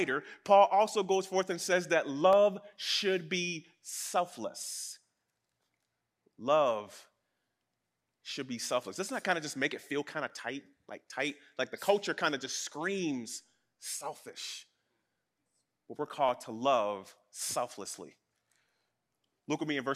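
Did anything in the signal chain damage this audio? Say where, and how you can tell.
Yes. The damage sits at the buffer between two devices. A click repeats through the speech roughly once a second, about 20 times, from 0.34 s to 19.28 s, at a steady 1.0 s interval. That regularity points to clock drift buffer slips. The likely cause is two clocks running apart by something like 150 ppm. The buffer slowly drifts until a few samples, around seven, are dropped or repeated, and each slip is heard as a click.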